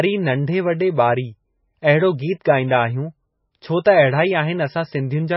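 Heavy MP3 compression, likely running at a very low bitrate around 17 kbps, shapes the speech from start to finish. Starved of bits, the encoder has removed everything above 5.5 kHz, so the sound is dull, and it drops weak frequency lines that flicker in and out between frames. That leaves a watery, swirling texture, with s sounds turning into metallic chirps and consonant attacks smearing.

At 2.44 s comes a pre-echo, just before "ॻाईन्दा आहियूं". A sharp onset fell late in a transform block, and the quantisation noise meant for the loud part was spread across the whole block, including the quiet moment ahead of the attack. What you hear is a brief hiss, about 13 ms long, arriving just before the onset, which then sounds soft and blurred instead of crisp.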